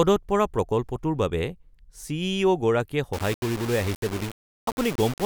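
From 3.13 s to the end at 5.25 s, the speech turns grainy, with distortion that follows the signal and sputters on quiet parts. This is low bit depth without dither, likely undithered rounding consistent with about 5 bits, leaving error only roughly 15 dB below the speech.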